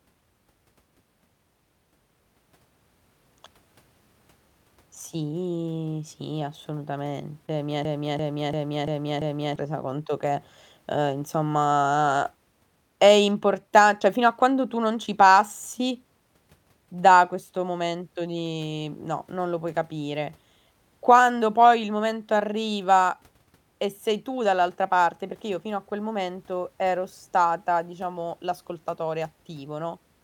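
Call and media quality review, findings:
Short concealed packet loss, 7.46–7.49 s, 14.00 s, 15.06 s (after "a quando tu non"), 22.39 s (after "poi il momento"). Brief smear/wobble in speech. Network/jitter buffer: 10–20 ms of audio missed the decoder deadline; concealment extended the preceding sound for 8–14 ms, then crossfaded back into real audio. First event largest, 20 ms missing.

System hang loop, 7.85–9.56 s, ending just before "resa conto che uhm". Machine-gun stutter: one 341 ms chunk repeated 5 times, about 2.9 Hz. Host/driver stall while the audio device kept replaying its ring buffer; loop length fits a 16384-sample buffer. Around 1.5 s of speech lost.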